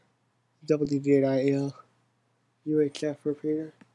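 No technical faults can be heard anywhere in the audio; the signal stays intact and continuous throughout.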